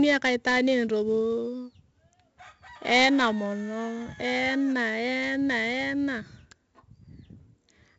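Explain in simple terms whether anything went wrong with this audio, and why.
Something did go wrong: the whole recording, from the first second to the last, carries heavy 4-bit ADPCM compression damage. This method saves space by storing each sample as a small step from a guess of what comes next, and its errors sound like a gritty hiss that rises and falls with the speech. Nothing reaches above 7.8 kHz, which points to a 16 kHz sample rate and makes the voice sound dull.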